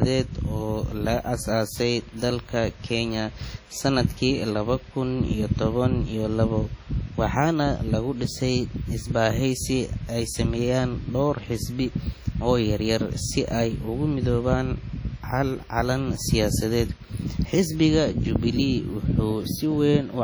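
WMA compression runs through the whole speech clip, heavy throughout: a ringing, washy smear with a hiss that swells and fades with the voice. The likely cause is transform coding at a low bitrate, around 32 kbps, which spreads quantisation noise over tens of milliseconds and drops weak spectral detail.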